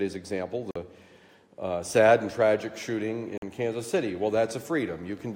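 At 0.71 s the sound cuts out for about 46 ms, ending at 0.76 s, and the same gap recurs from 3.38 s to 3.42 s. These holes are most likely a Bluetooth dropout: audio packets missed their delivery window to the headphones and were discarded, which fits two lost packets each time. The output falls silent and then resumes later in the material, as if playback had continued unheard through the gap.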